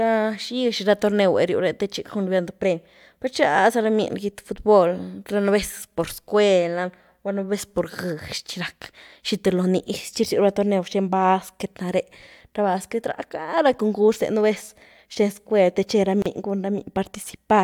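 Two separately encoded pieces were joined at about 16.22 s without trimming the encoder's start-up delay and end padding, leaving a gap at a join of encoded pieces. The speech drops out in a 34 ms gap with smeared edges, so the truly silent part is shorter, then resumes exactly where it stopped.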